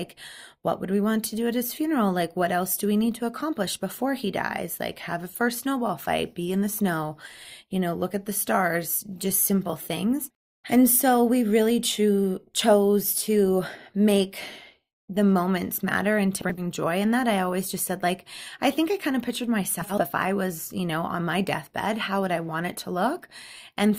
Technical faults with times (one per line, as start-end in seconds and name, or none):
16.41-16.63 frames out of order
19.81-20.02 frames out of order